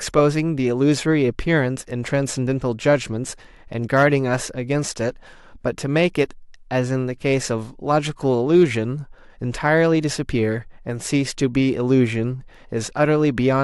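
A harsh crackle catches the loudest speech peaks at 3.96 to 4.14 s, 8.55 to 8.63 s and 9.66 to 9.69 s. This is hard clipping: peaks driven about 3 dB, then about 2 dB, then right up to the converter's limit get cut flat, spraying high harmonics.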